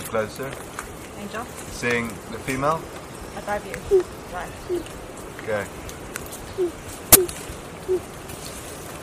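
Corrupt frame decoded at 0.84, 2.22, 4.77, 7.12 and 8.32 s. Damaged frames put energy at wrong frequencies, heard as brief chirps or bursts and seen as short spectrogram smears; 7.12 s is loudest.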